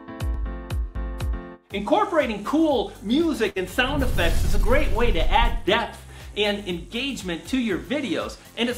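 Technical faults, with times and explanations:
3.49 to 3.62 s, burst of packet loss: for about 64 ms the receiver extends the last sound and fades it, giving a held, decaying tail, then playback resumes further on with roughly 60 ms of audio missing. This fits several consecutive packets lost or arriving too late.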